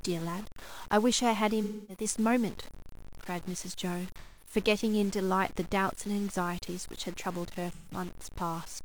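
Throughout the speech there is grainy distortion that shifts with the signal. The error sits only about 20 dB below the level, so quiet passages turn gritty and the softest parts sputter. The likely cause is low bit depth without dither, consistent with truncation to around 6 bits, which leaves rounding error that tracks the waveform.

AAC frame loss with concealment occurs at 1.63–2.04 s, 4.19–4.55 s and 7.73–7.92 s, with gaps of about 256, 213 and 128 ms. The decoder fills each gap from the last good spectrum, producing smeared, phasey, noisy stretches in place of the speech.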